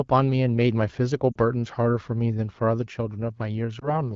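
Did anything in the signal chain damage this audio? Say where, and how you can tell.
Yes. Network stage: lost AMR speech frames at 1.32–1.38 s and 3.79–3.97 s. Radio errors corrupted frames, so the decoder repeated old speech parameters, causing brief dips and warbles.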